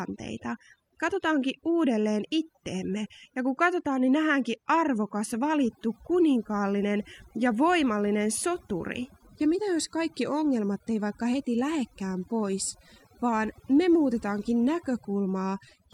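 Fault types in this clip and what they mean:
Overdone noise removal: Noise reduction set too strong across the whole clip. Bands near the noise floor are cut, taking quiet speech detail. The background breaks into twinkling, warbling specks.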